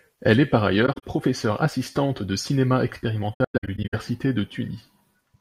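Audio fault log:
0.86–1.04 s and 3.34–3.94 s, AAC frame loss with muting: the sound drops out in soft-edged gaps. About 0.11 s goes missing in the first stretch (longest gap around 40 ms) and 0.36 s in the second (longest around a tenth of a second). Lost frames were decoded as silence, and the overlapping windows fade each gap in and out.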